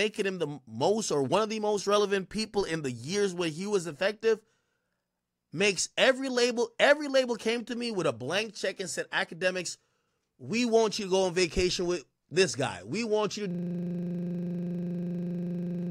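At 13.51 s a system hang loop kicks in: the machine froze while the hardware kept replaying one 40 ms buffer, giving a rough 25 Hz buzz right to the end.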